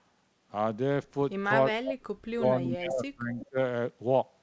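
From 1.79 to 3.58 s the speech dips and breaks up in pieces, sinking by as much as about 35 dB and losing around one and a half seconds in total. This is speech suppressed in double talk, likely from an echo canceller that couldn't tell the local talker from loudspeaker echo while both sides spoke, and so turned everything down.

Between 3.40 and 3.46 s a brief, faint scrap of the voice returns about 20 dB below the speech, 376 ms behind the original. This echo leak is likely a loudspeaker's output getting past the far side's echo canceller and being sent back. Across the clip, the call path's G.722 coding leaves nothing above 8 kHz.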